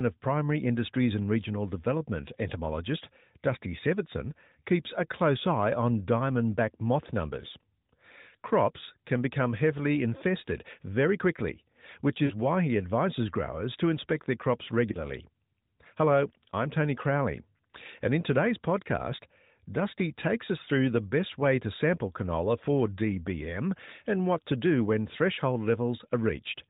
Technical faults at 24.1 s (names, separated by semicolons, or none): none